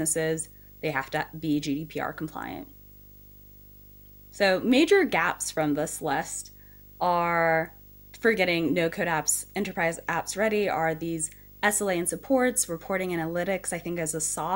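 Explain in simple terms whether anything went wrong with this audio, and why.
Yes, something went wrong. Video or display buzz runs under the speech from start to finish. A screen or video cable leaked into the audio. It makes a steady 50 Hz buzz with hiss on top, plus a very high 15.6 kHz whine.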